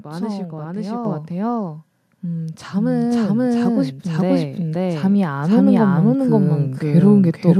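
A speech recording carries a doubled audio track for its whole length: a second full-band copy of the speech runs about half a second behind the first, at roughly the same level. The trailing copy has no decay or added room colour, so it reads as a clean repeat rather than an echo off walls. The likely cause is the same signal reaching the mix twice, once directly and once through a slower path, or an edit that left two out-of-step copies layered together. There are also two cases of microphone volume stepped up, where the input gain on the capture device was raised in a single jump. At 1.05 s the level rises by about 6 dB, and at 3.12 s by about 2 dB. Both the speech and the background noise floor rise at those moments, which points to a device-level gain change rather than anything the talker did.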